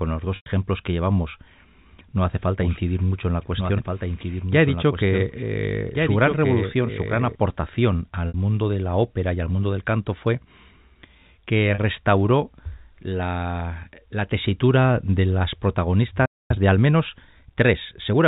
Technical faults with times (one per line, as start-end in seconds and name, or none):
0.36-0.46 packet loss with pitch repetition
2.61-7.35 doubled audio track
8.28-8.34 packet loss with pitch repetition
11.74-11.78 packet loss with pitch repetition
16.26-16.51 playback stall
16.51-18.19 time-compressed catch-up